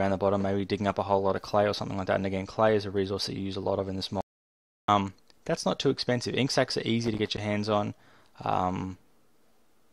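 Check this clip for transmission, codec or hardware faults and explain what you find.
Two faults are audible, one in the transmission path and one in the hardware.

From 4.21 to 4.88 s, an audio dropout to silence removes about 0.67 s, likely from a lost input link; the waveform flatlines, with a blank spectrogram and no room tone.

From 7.04 to 7.38 s, loose connector crackle: an intermittent contact chops the signal, producing irregular scratchy crackle seen as jagged spikes and broadband vertical streaks.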